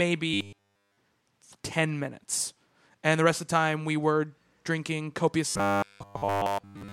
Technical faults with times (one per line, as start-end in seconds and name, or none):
0.34-0.98 robotic sound from repeated short buffers
5.48-6.93 robotic sound from repeated short buffers